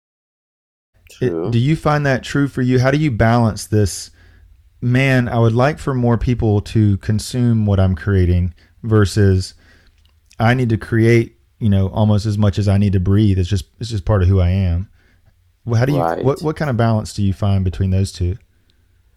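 No technical faults can be heard in this speech recording. At the opening, the level rises in a smooth fade over roughly the first second, with no click or hard edge.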